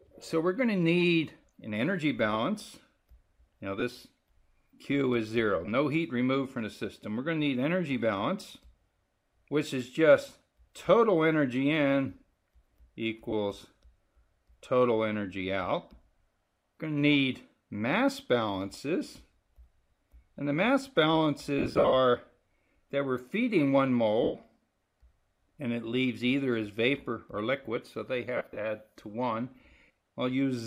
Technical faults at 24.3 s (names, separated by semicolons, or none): lost LE Audio frames